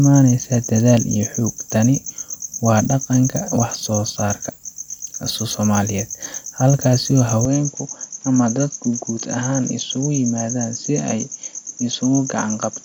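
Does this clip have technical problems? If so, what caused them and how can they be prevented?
Yes. At 7.45 s the input was likely switched to a poorer device, and the recording stays on it until the end of the clip at 12.85 s. The new input passes nothing above 7.2 kHz, so the speech abruptly turns duller and boxier, drops a few decibels in level, and carries a faint new background noise well below the signal. The change happens with no gap at the switch. To prevent it, lock the recording input to one device so the system cannot reroute mid-session.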